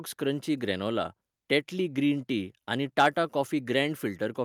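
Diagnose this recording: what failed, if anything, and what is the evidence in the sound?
Microphone overload, right around 3.0 to 3.06 s: there's a brief harsh, crackly edge on the speech peak there. It's likely the input gain was set too high, so the converter ran about 4 dB past full scale and flattened the tops of a small fraction of samples.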